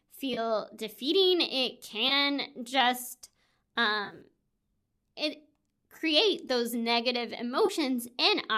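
At 0.34, 2.09, 4.05, 5.97 and 7.66 s the speech shows AAC frame loss with concealment. Brief smeared, noisy patches, each about 20 to 30 ms long, which fits runs of 10 ms frames. At 4.05 to 4.21 s, about 80 ms of audio goes missing in short bursts scattered across 160 ms, the longest gap roughly 30 ms. The decoder bridges each hole by reusing the last good spectrum, so none runs long enough to fade into silence. That sets these apart from hard dropouts or clicks: the gaps are filled with blurred sound rather than cut. The framing likely comes from low-delay AAC, whose light coding roughness sits under the whole clip.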